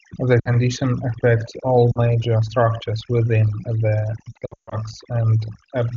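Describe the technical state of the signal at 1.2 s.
Overdone noise removal is present at 1.2 s and runs through the whole clip. The suppressor cuts frequency bands close to its noise estimate far down or out, taking quiet speech detail with them. The background drops and breaks up into twinkling specks. The AMR wideband (HD Voice) path, at a rate that fits 23.85 kbit/s, adds little audible damage of its own.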